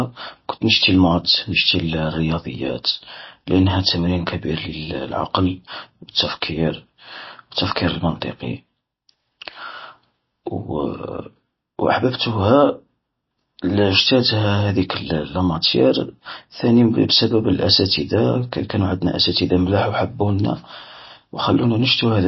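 It's a speech clip with plainly audible MP3 compression damage throughout: nothing above 5.8 kHz, so the top end sounds dull, plus a watery, swirly quality as weak frequency lines drop in and out, which fits a starved bitrate likely near 24 kbps.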